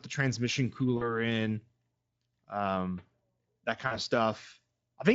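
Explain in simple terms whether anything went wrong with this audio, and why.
VoIP packet loss concealed by the speech codec, at 0.97–1.15 s just after "the transmission" and 3.87–3.96 s: about 40 ms of audio went missing, so the decoder guessed and faded it.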